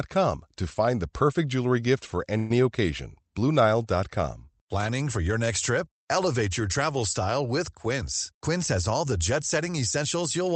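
At 2.37 s, right after "perfect jewelry gift for", a call audio freeze runs to 2.64 s. The last sound is stretched into a short fading buzz for about 127 ms, likely because delayed packets left the jitter buffer empty. The speech then resumes exactly where it stopped. Unlike a packet-loss dropout, nothing is missing; only a gap has been inserted.

From 7.76 s to 10.05 s, after "your travel style with", a jitter buffer speed-up makes the speech run about 5% fast and sound slightly hurried. Around 150 ms is trimmed away in small pitch-period pieces. Unlike a sample-rate or playback-speed error, the pitch stays the same. Throughout, the Opus call path keeps the sound band-limited, consistent with an 8 kHz bandwidth.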